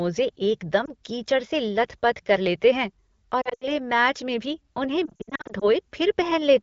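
Lost AMR speech frames occur three times. The decoder replays the last good pitch and vocal tract settings at falling gain. At 0.85 to 0.90 s, just before "कीचड़ से", there is a brief warble. It fits a single lost frame. From 3.41 to 3.68 s, between "कर लेते हैं" and "मैच में भी", the speech smears and dips repeatedly, with gaps up to 80 ms. From 5.05 to 5.65 s, scattered dropouts of up to 60 ms make the speech stutter and fade briefly. Between them, the AMR wideband codec at 12.65 kbit/s keeps the speech clear.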